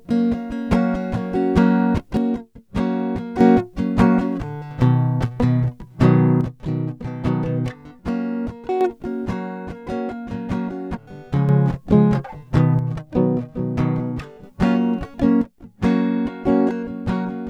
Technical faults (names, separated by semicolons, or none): one channel drops out